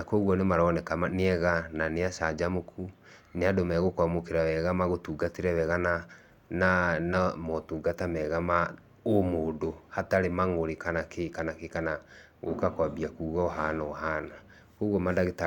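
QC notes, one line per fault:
Nothing to log, as no faults were heard in the speech. There are no times or ranges to list.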